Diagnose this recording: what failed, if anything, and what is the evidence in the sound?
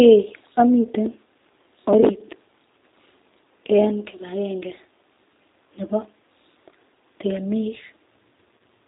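G.729 codec coding, throughout the speech, at the codec stage. The whole clip has a thin, slightly rough and synthetic quality, with nothing above 4 kHz, and that damage is plainly audible. The sound points to G.729A at about 8 kbit/s. The decoder rebuilds each 10 ms frame from a vocal-tract filter, a pitch predictor and a handful of pulses, so fine detail and natural breathiness are replaced by a modelled approximation.

VoIP packet loss concealed by the speech codec, at the network stage, near 2.01 to 2.04 s and 8.58 to 8.61 s. At both points the speech is briefly stretched and fades, then stays weak for a moment after normal audio resumes. The first gap, about 10 ms, fits one lost frame. The second, about 20 ms, fits two. The decoder extrapolated its last pitch and filter with falling gain, and that decaying state carried into the following frames.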